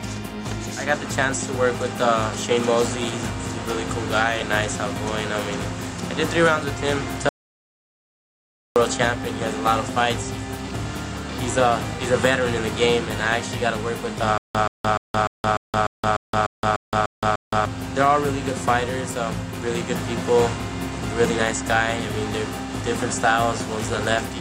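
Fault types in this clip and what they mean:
Audio dropout to silence: from 7.29 to 8.76 s the sound vanishes into dead digital silence for about 1.47 s, likely a briefly lost input.
Stutter with silent gaps: from 14.38 to 17.65 s, a 129 ms fragment repeats 11 times, every 298 ms with 169 ms of silence, likely a stalling stream.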